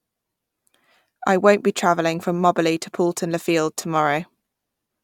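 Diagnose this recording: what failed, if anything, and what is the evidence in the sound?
Codec trouble: AAC frame loss with concealment, 3.80 to 3.84 s. That 21 ms smear fits one lost frame, refilled from the previous spectrum.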